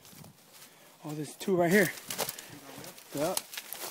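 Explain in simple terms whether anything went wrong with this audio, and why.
Nothing went wrong here; no faults can be heard.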